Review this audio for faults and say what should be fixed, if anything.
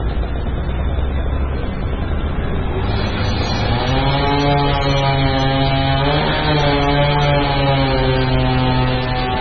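Heavy MP3 compression is the likely cause of the damage running through the whole clip. Nothing survives above 6.7 kHz, and the remaining sound is watery and swirly, with weak frequency lines flickering on and off from frame to frame and attacks smeared. That fits a very low bitrate, around 16 kbps. A plain low-pass filter would only dull the top end, but here the watery swirl and the smeared transients mark a starved perceptual codec. To prevent this, keep an uncompressed or lossless master and encode at a much higher bitrate.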